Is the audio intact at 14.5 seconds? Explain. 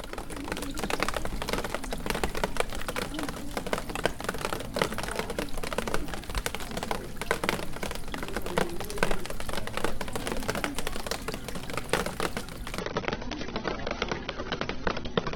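No. From 12.8 s to the end, the adaptive stream drops to a lower bitrate, likely around 24 kbit/s. Treble vanishes above 6.3 kHz, with no gap.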